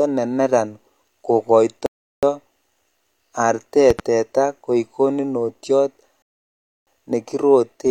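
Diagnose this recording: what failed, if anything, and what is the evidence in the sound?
The playback stage shows rebuffering stalls. The speech cuts to silence at 1.86 s and resumes at 2.23 s, adding 0.37 s, then again from 6.22 s to 6.87 s, adding 0.65 s. Each time it picks up exactly where it stopped, so nothing is lost. The player ran dry and waited for data.

A loud pop, two sharp clicks in quick succession between 3.90 and 4.02 s, peaks about 10 dB above the speech, which continues unbroken underneath. The likely cause is a voltage step in the analogue wiring or driver, such as a plug, switch or static discharge, shaped by the downstream circuitry.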